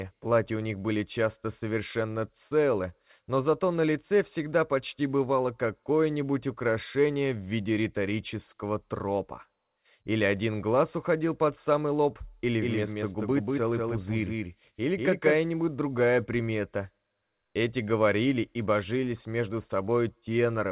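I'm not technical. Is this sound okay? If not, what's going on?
No. From 12.45 to 15.37 s, a slightly quieter second copy of the sound trails about a fifth of a second behind. This is a doubled audio track, likely from the sound being captured twice.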